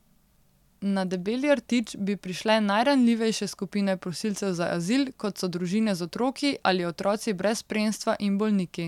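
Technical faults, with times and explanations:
Nothing technical stands out here, as the recording holds steady all the way along with no faults to point to.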